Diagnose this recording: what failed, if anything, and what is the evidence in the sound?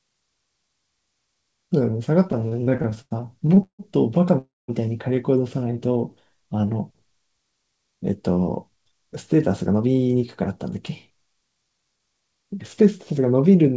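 Repeated stalls (stutter) sit in the network and jitter buffer stage. Between 2.32 and 3.81 s the speech halts 15 times. The longest hold lasts 158 ms. About 0.43 s of filler covers 29% of that span. Nothing is lost. The receiver kept running out of packets and stretched the last sound each time. That makes the speech drag and catch.

A call audio freeze follows from 4.39 to 4.70 s. The last sound carries on briefly, then about 200 ms of silence follows. Speech resumes where it stopped. The total fill is 296 ms, and the playback delay grows by the same amount. The likely cause is packets held up in the network, draining the jitter buffer. The gap is inserted, not cut from the speech.

A jitter buffer slow-down runs from 5.59 to 6.67 s. Speech plays at 89% speed with unchanged pitch. About 123 ms is added. Sounds are drawn out. The buffer was rebuilding its reserve. It did this by repeating single pitch periods or bits of pauses many times in a row. 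This is call processing at the receiver, not a recording fault.

A jitter buffer speed-up appears twice. From 8.40 to 10.43 s speech runs at 107%, with roughly 150 ms removed. From 10.89 to 13.11 s it runs at 108%, with about 200 ms removed. Pitch holds steady while the pace sounds hurried. The buffer held more audio than its target. It trimmed short pitch-period pieces repeatedly to cut the delay. The G.722 path, at 64 kbps, shows its expected cutoff at 8 kHz.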